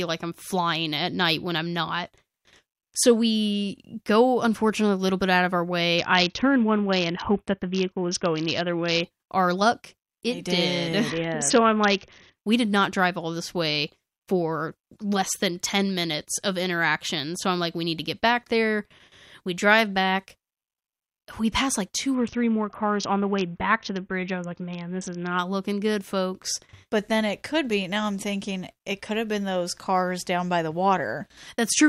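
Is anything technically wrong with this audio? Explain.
Yes. A Bluetooth SBC bit pool drop occurs from 5.98 to 9.03 s, 11.10 to 12.38 s and 22.14 to 25.39 s. The top sub-bands lose their bits, so the speech turns dull and gritty. Unlike packet loss, nothing drops out. The sound fits a bit pool falling from about 28 to 6, near 60 kbps.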